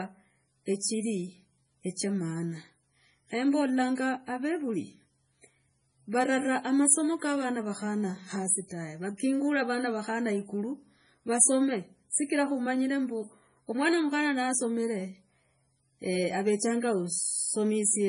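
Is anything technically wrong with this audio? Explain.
Yes. Throughout the speech there is heavy damage, likely from MP3 compression at a rate pointing to about 24 kbps. Short of bits, the encoder removes everything above 10.6 kHz and zeroes weak frequency lines frame by frame, so the sound turns watery and s sounds chirp metallically. A spectrogram shows a flat ceiling at 10.6 kHz with flickering holes below it.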